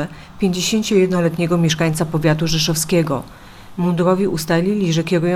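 Digital radio blending to analogue, 0.88 to 4.11 s: the receiver lost the digital stream and cross-faded over 0.46 s to the FM broadcast. This added faint hiss roughly 45 dB down and shifted the level about 2 dB, then it blended back.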